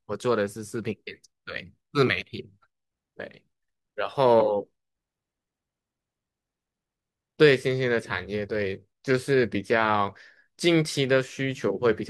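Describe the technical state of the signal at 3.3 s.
At 3.3 s the signal is intact, with no dropout, distortion or other technical fault audible at that point.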